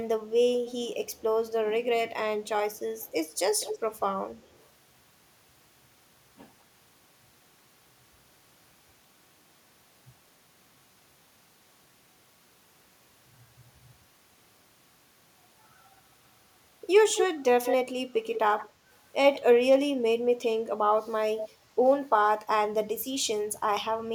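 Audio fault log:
0.67–1.21, 2.46–3.80, 4.35–4.67 s: echo leak. An echo canceller at the far end likely let loudspeaker sound back into its microphone, so a delayed copy of the speech returns 219 ms late, then 204 ms. It is faint at first, most noticeable at 2.46–3.80 s, and barely there by 4.35 s.
17.15–17.75, 18.34–18.68, 19.34–19.39, 21.38–21.48 s: echo leak. Here the copy arrives 204 ms and then 175 ms behind. At 17.15 s it is nearly as loud as the speech and gives a strong doubled sound, and it is weaker in the later bursts.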